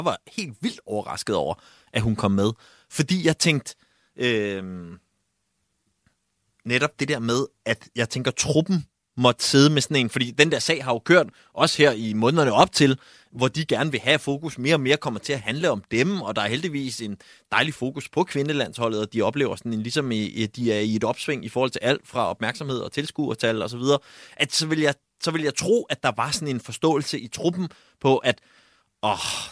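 Listening to this speech recording, nothing stood out as a technical problem at any point.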